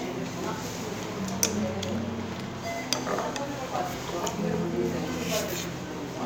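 No technical faults can be heard anywhere in this recording of everyday sounds.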